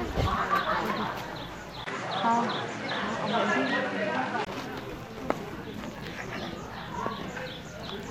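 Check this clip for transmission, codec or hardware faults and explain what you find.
Two faults turn up in this audio, one after the other.

From 1.84 to 4.47 s the sound goes duller: nothing survives above 11.4 kHz, the level shifts by around 5 dB, and a fresh noise floor sits roughly 40 dB under the signal. A 20 ms gap marks the change. That pattern most likely means the input switched to a poorer device mid-recording, with a narrower band, its own gain and its own hiss, before the original input comes back.

Between 5.50 and 6.53 s there are five ticks, the longest only a few milliseconds, spaced about once per revolution of a disc. These are CD scratch ticks: each time the damaged spot passes the laser, more data is lost than error correction can rebuild, so the player patches or mutes those samples, leaving a brief click or micro-dropout at a steady rhythm.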